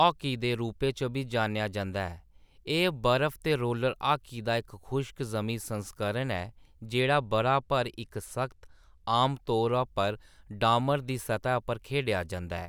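A speech recording, and from about 7.00 to 9.15 s it picks up channel delay (comb filtering): one side lags by roughly a sample, so the mono sum cancels near the very top, around 20 kHz, and that stretch loses a bit of air and sounds slightly dull.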